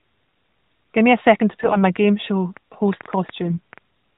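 AMR bit errors, 1.62 to 1.82 s, right after "a second to": flipped bits in the lightly protected part of the speech frames, at a few percent, misplace the excitation pulses and skew fine pitch, gain and spectral values, so the speech turns briefly hoarse and gargly while keeping roughly its pitch and level.

Train of clicks, 1.96 to 3.79 s: about ten similar pulses at around 4.4 per second, irregularly spaced and peaking a few dB above the speech, tick through the sound and its pauses, likely from interference or a faulty connection.

AMR bit errors again, 3.46 to 3.59 s, inside the click train: a slightly heavier burst of flipped low-priority bits gives another short scratchy, gargling patch.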